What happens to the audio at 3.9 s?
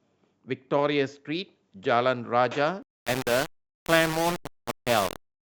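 Low bit depth without dither affects the speech from 2.83 s to the end, including 3.9 s. The grainy, signal-following distortion points to likely rounding to about 4 bits with no dither. Quiet passages turn gritty, with error only about 10 dB below the sound.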